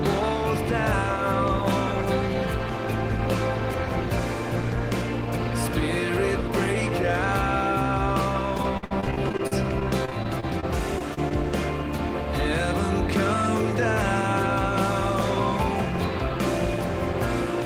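From 8.57 to 11.32 s, repeated packet loss (robotic sound) sets in. Data keeps arriving lost or late, and the receiver plugs each hole by stretching the last sound it had, only to hit the next hole moments later. About half a second gets patched this way and roughly a third of a second is simply gone, with the longest dropout near 60 ms, so the audio turns choppy, with pieces missing.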